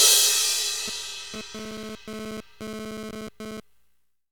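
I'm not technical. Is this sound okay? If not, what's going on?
No, there's a GSM phone buzz from about 0.88 s to 3.6 s. A nearby 2G phone was sending data in quick radio bursts, 217 a second, and the audio gear picked them up as a harsh, raspy buzz that comes and goes over the sound.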